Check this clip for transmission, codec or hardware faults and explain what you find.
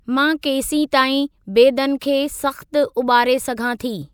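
No faults can be heard.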